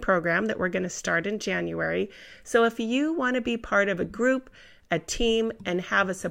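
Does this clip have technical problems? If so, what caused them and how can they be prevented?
No, there are no audible technical faults in this speech recording, so nothing needs preventing.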